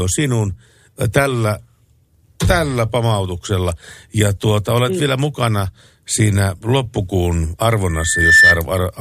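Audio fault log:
7.89–8.62 s, loudspeaker feedback squeal: after "vielä mukana siinä loppukuun", a 1.8 kHz tone rises. It swells over about half a second to about 10 dB above the speech. The microphone picks up its own loudspeaker, and the loop runs away.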